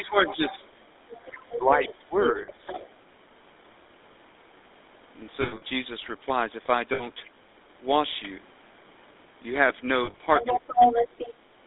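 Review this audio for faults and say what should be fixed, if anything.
The GSM full-rate codec colours the whole clip with a plainly audible buzzy, gravelly roughness. The coarse pulse excitation fits a 13 kbit/s full-rate coder, and the band is confined to roughly 250 Hz to 3.7 kHz. To prevent it, carry the call over a wideband codec such as AMR-WB or EVS.

Speech suppressed in double talk: the speech level dips by about 15 dB from 0.0 to 0.66 s, by about 20 dB from 1.58 to 2.79 s, and by about 15 dB from 10.51 to 10.94 s. The likely cause is an echo canceller ducking the near talker while the far end was also active. To prevent it, tune the double-talk detector so it holds near-end speech at full level instead of attenuating it.

Other side's voice leaking through: a second voice is heard from 0.26 to 0.67 s at about 15 dB below the speech, from 1.87 to 2.04 s at about 20 dB below, and from 2.2 to 2.9 s at only about 5 dB below. 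It is likely loudspeaker echo that the canceller did not remove. To prevent it, lengthen the echo canceller's tail, improve its convergence, or have the talker use a headset.

Lost GSM frames: a rough, metallic held ring replaces the signal at 2.42 s for 60 ms, from 5.42 to 5.62 s (140 ms scattered over 200 ms), at 6.94 s for 60 ms, and from 10.04 to 10.21 s (100 ms scattered over 160 ms). Each hold repeats the last good frame, which fits runs of 20 ms frames. To prevent it, improve radio link quality or add stronger channel protection.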